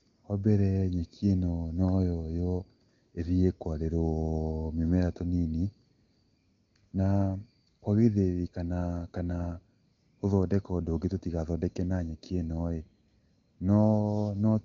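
This speech clip comes through the AMR wideband (HD Voice) codec at 23.85 kbit/s, top end stopping near 7.4 kHz as that path does, and there's nothing technically wrong to point out.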